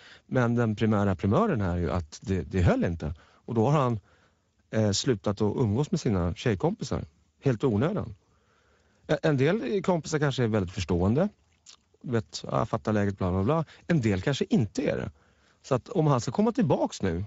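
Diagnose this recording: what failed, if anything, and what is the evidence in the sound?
The codec stage failed. Speex coding roughens the speech throughout, plainly audible, with noisy, hoarse excitation. That fits a setting around 16.8 kbps, starving the excitation of bits.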